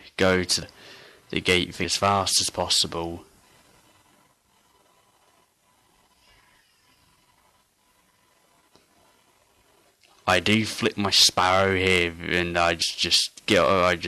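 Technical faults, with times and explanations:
0.62 s, 1.84 s and 12.82 s: compressed frames skipped. Audio jumps ahead about 150 ms each time, fitting several dropped 32 ms frames, leaving an audible join.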